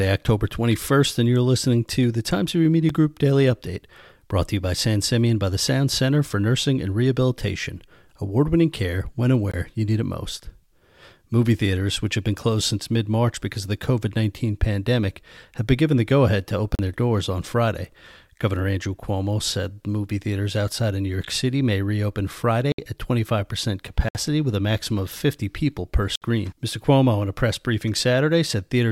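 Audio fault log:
2.89 s, 9.52–9.54, 16.75–16.79, 22.72–22.78, 24.09–24.15, 26.16–26.22 s: block of digital silence. The output went to zero and back with no fade. The 8 ms one just ticks, the 21 ms gap after "winning care when and" fits a 1024-sample buffer, and the 64 ms ones are audible holes.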